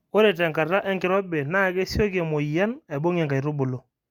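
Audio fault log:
No fault can be heard anywhere in the speech. Nothing in the clip calls for a log entry.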